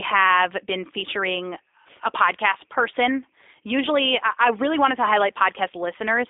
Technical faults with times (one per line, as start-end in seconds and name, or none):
0.00-6.30 G.729 codec